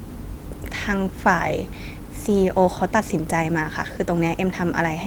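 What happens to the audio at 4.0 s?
At 4.0 s the audio is intact, with no dropout, click or distortion; the speech simply continues through Opus voice compression at about 20 kbps, which leaves only light coding texture.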